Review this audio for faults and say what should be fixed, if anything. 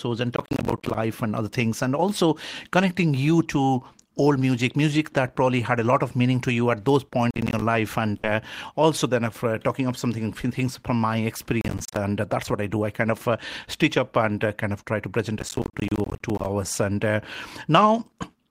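Processor overload crackle shows up four times: 0.36 to 0.95 s, 7.31 to 7.62 s right after "to you at those", 11.61 to 11.97 s after "something things from my", and the longest stretch at 15.39 to 16.46 s. The CPU keeps missing its buffer deadlines, and each miss drops a short slice of silence with hard edges. Strung together, those give the gritty crackle, and the spacing fits buffers of roughly 10 ms. To prevent it, give the audio thread more headroom, either by cutting competing load or by raising the buffer size.

There's a burst of packet loss at 8.17 to 8.26 s, just before "also then of uh". For about 60 ms the receiver stretches the last bit of sound and fades it out, which you hear as a short held, thinning tail. The audio then jumps ahead, and roughly another 60 ms of the original is simply gone. To prevent it, use a steadier network path or a larger jitter buffer, with some forward error correction to cover short bursts.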